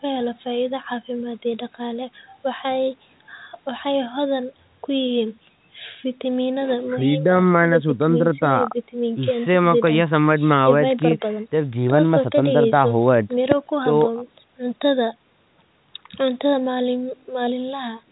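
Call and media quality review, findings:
No faults found; nothing to flag on this call.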